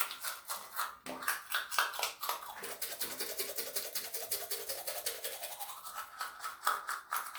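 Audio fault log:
Nothing stood out on listening to these sounds.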